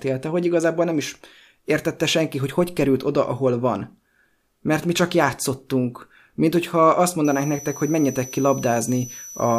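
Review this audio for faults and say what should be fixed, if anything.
A switching supply whistle runs from 7.25 s to 9.58 s: a high tone between 5.9 and 6.0 kHz, about 15 dB below the speech, from a switching supply running in audible burst mode or beating with another one. Fix it by powering the recording chain from a linear or well-filtered supply, kept away from the microphone and preamp cabling.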